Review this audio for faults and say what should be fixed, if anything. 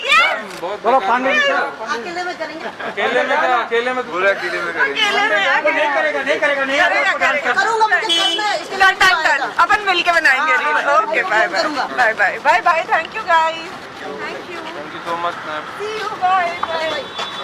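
A skip ahead occurs at 2.61 to 2.72 s. Roughly a second and a half of audio was discarded while later packets were already queued, so playback jumps forward and the two sides are joined almost directly, cutting latency by a similar amount. Prevent it by letting the jitter buffer drain gradually through time-scale compression instead of dropping a block when it overflows.

Jitter buffer speed-up runs from 3.66 to 4.75 s at 103% (about 40 ms removed), from 5.62 to 6.60 s at 105% (about 50 ms), and from 7.09 to 10.45 s and 10.88 to 14.90 s at 110% (roughly 0.4 s each). The receiver repeatedly cut out pitch-period-length pieces to reduce excess buffered delay, so the audio runs faster at unchanged pitch and sounds hurried in the 105% and 110% stretches. Prevent it by capping the compression rate and fixing the upstream jitter that causes packets to arrive in bursts.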